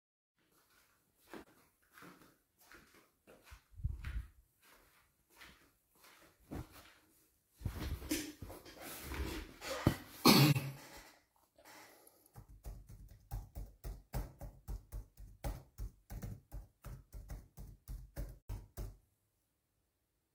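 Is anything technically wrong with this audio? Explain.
Yes. Three brief soft-edged holes appear at 1.42–1.48 s, 10.51–10.57 s and 18.40–18.50 s, where the sound fades out and back in. This is AAC frame loss with muting. The decoder zeroed the missing spectrum, and the overlapping windows smeared the edges. The gaps of about 43 ms and 85 ms fit one lost frame and two lost frames.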